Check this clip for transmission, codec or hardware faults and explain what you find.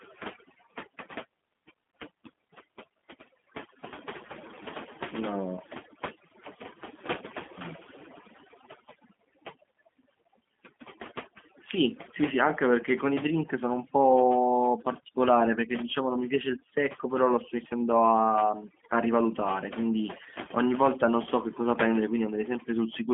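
Two faults run through the whole speech clip: overdone noise removal and G.729 codec damage on a narrowband line.

The overdone noise removal is present from start to finish. The suppressor treated anything near its noise estimate as noise and pulled those frequency bands down hard, taking the quieter parts of the speech with them. The pauses drop to near silence sprinkled with twinkling specks. A spectrogram shows a dark, empty floor dotted with isolated bright flecks, with the weaker harmonics eaten away in patches.

The G.729 codec also runs throughout, and its damage is plainly audible. The line passes roughly 200 Hz to 3.5 kHz and nothing gets through above 3.7 kHz. That points to a G.729A link at about 8 kbit/s, which rebuilds speech from a vocal tract filter, a pitch predictor and a few pulses per frame. The voice comes out muffled, slightly rough and synthetic. A spectrogram shows a hard ceiling with everything above 3.7 kHz blank, and speech texture that is smeared rather than crisp.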